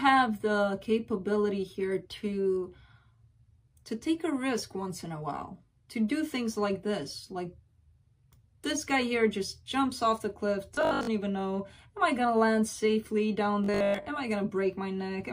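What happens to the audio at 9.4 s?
Nothing goes wrong at 9.4 s: the audio plays through that moment intact, with no dropout, click, distortion or other fault.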